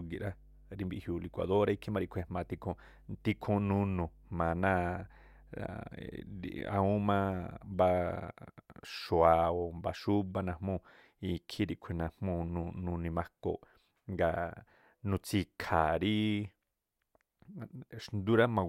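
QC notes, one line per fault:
0.00–7.82 s, mains hum: a steady low 50 Hz drone sitting roughly 25 dB under the speech, from power-line coupling through a ground loop or nearby transformer.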